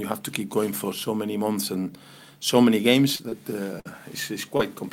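Short concealed packet loss at 3.15 to 3.21 s and 3.29 to 3.34 s: roughly 40 ms and 20 ms went missing, and the decoder patched each gap by extending the preceding sound, heard as a brief smear. A burst of packet loss at 3.80 to 3.87 s drops about 60 ms; the held-over sound fades before the audio resumes further on. Another short concealed packet loss at 4.57 to 4.61 s covers a 20 ms hole with a quick wobble.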